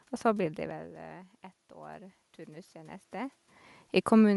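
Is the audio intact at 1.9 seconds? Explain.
No. At 1.9 seconds the automatic gain is rising. It started climbing at about 1.73 s and keeps going until about 3.42 s. The level reaching the gain control had dropped by about 18 dB, so it pushed its gain up gradually, by about 5 dB in all. You hear the speech and the room noise swell together over that stretch of about 1.7 seconds. The change is slow, not a jump.

The second fault is grainy, breathy coding damage that you can plainly hear there and across the whole clip. The likely cause is Bluetooth LC3 compression. It is a transform codec that works on short blocks, and this fits 10 ms frames at around 48 kbps. It throws away much of the upper spectrum and fills the gaps with noise, which leaves that rough edge on the speech.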